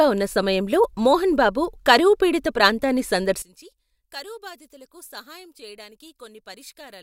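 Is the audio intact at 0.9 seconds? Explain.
Yes, at 0.9 seconds the speech plays through intact, with no dropout, click, distortion or other fault to be heard at that point.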